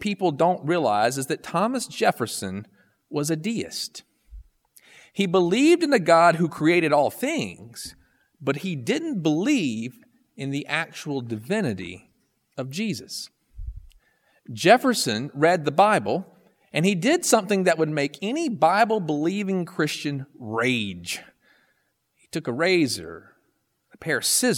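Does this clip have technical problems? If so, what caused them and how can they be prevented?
No, nothing in this speech recording calls for a cause or a fix.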